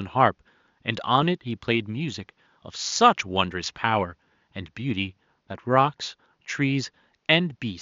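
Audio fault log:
No faults detected.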